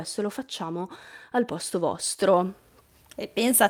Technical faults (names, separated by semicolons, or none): none